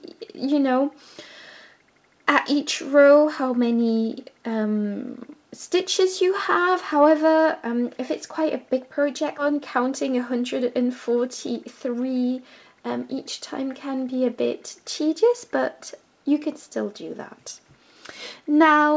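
At 9.38 s the audio skips ahead. Roughly 0.7 s of sound is missing, and the two sides of the jump are butted straight together with no silence or concealment filling the hole. That sets it apart from a dropout, which leaves a gap or a smeared fill. Here the timeline simply jumps forward, as when a jitter buffer throws away a backlog or a stretch is lost on the way while later audio is already queued.

Right after, from 9.5 to 12.3 s, comes a jitter buffer speed-up. The receiver is still holding more audio than it wants, so it trims short pitch-period-sized pieces again and again, about 200 ms in all. Playback runs at about 106 % speed and sounds slightly hurried. Unlike a resampling error or a pitch shift, the pitch stays where it was. Only the pace changes. Through both faults the G.722 call codec keeps its usual coding noise and leaves nothing above 8 kHz.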